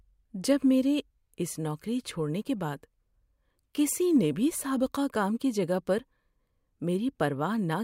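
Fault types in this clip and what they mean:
No faults are audible here.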